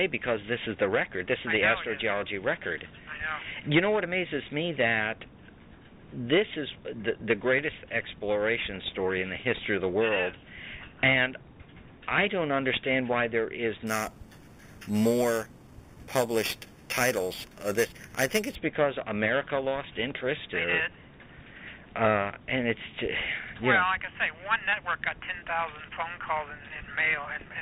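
From 13.87 to 18.55 s, imaging from sample-and-hold upsampling: repeated, unsmoothed samples, consistent with an 8 kHz source rate, mirror the spectrum into 4 to 8 kHz, giving a metallic fizz about 13 dB down.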